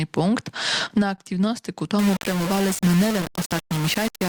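From 0.79 to 1.51 s there's a repeated stalls (stutter) problem. The jitter buffer ran dry four times and the receiver stretched the last sound over each gap, about 54 ms in total, the longest 21 ms. Nothing's actually lost, but the audio hiccups and drags.

From 1.99 s to the end, the sound turns grainy and gritty, with noise sitting only about ten dB under the signal and tracking it closely. That's likely low bit depth without dither, something like rounding to 3 bits with no dither to smooth the steps.

Inside that stretch, from 2.53 to 3.09 s, you get a jitter buffer slow-down. The buffer was short, so the receiver repeated tiny pitch periods or pause fragments to build up a reserve, adding about 53 ms. The audio plays at roughly 92% speed with unchanged pitch, so things sound drawn out.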